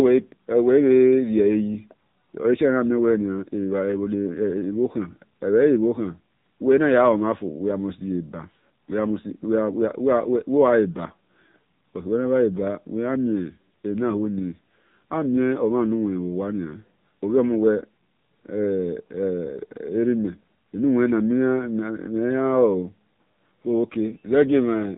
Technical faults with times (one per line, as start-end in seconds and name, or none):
0.00-24.98 AMR narrowband mobile codec